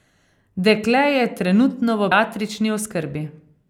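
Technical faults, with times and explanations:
2.12 s, damaged data in a compressed stream: right after "je trenutno v", the speech breaks into a brief glitch. Part of the compressed data at this point was corrupted, so the decoder could not read the affected frame correctly, lost sync, and skipped forward until it found the next valid frame header, producing that glitch in the flow.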